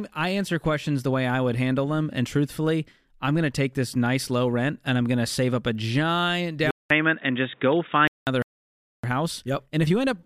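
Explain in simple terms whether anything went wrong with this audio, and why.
At 6.71 s the speech turns dull and muffled, after a 0.2 s gap, until 8.27 s. That points to an input switched to a poorer device, likely a headset or second microphone.

From 8.42 s to 9.04 s the sound simply stops for 0.6 s. This is a playback stall, likely the player running out of data.

From 9.04 s to the end, speech runs about 1.1 times faster at normal pitch. This is time-compressed catch-up, where the player trims small pieces to recover lost time.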